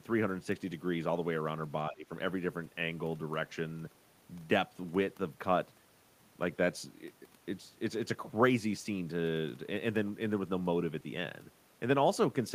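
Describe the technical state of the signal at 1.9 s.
An echo canceller likely mistook overlapping talk for echo, causing speech suppressed in double talk from 1.89 to 2.1 s, with the speech dipping around 15 dB.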